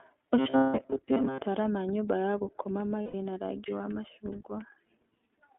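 The whole clip is speech squeezed through the iLBC codec, limited to roughly 250 Hz to 3.5 kHz, so it sounds thin and phone-like, with a plainly audible rough, slightly synthetic grain. The 20 ms frame rhythm points to the 15.2 kbps mode. Each frame's excitation gets coded on its own, which keeps things intelligible but costs naturalness.

From 0.38 to 1.41 s there's robotic sound from repeated short buffers. The sound turns into a rigid, metallic buzz locked at about 133 Hz, still loosely tracking the speech underneath. That pitch fits a tiny buffer of about 7.5 ms being replayed over and over, likely because fresh audio was arriving too slowly. Most of the real audio in that stretch is skipped rather than heard.

Overlapping that, from 0.50 to 0.81 s, come lost iLBC frames: around 240 ms missing, scattered over about 280 ms, with one run of about a fifth of a second. The decoder bridges the gaps by repeating the last pitch cycle mixed with noise, so you get a held, buzzy, breathy vowel that fades. 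A second loss at 3.02 to 3.14 s, about 120 ms, does the same, and since iLBC frames stand alone, the speech comes straight back once real frames return.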